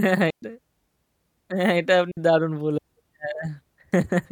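A digital wireless dropout occurs twice: the receiver loses too much of the link's data and mutes, leaving clean holes of near silence in the speech from 0.30 to 0.42 s (about 120 ms) and from 2.11 to 2.17 s (60 ms), with no noise burst on either side.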